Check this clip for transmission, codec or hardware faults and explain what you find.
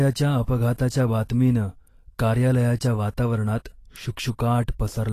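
One codec fault runs through the whole recording. From start to end, the speech has a grainy, hissy sheen on its sibilants and upper harmonics, and nothing is present above 14.2 kHz. The likely cause is Vorbis compression at a rate that fits roughly 36 kbps. The encoder keeps a smooth spectral envelope but quantises the treble detail so coarsely that it turns into noise of similar energy. A plain low-pass filter would give clean dullness, not this noisy roughness.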